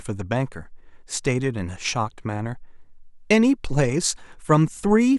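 No technical faults can be heard anywhere in this recording.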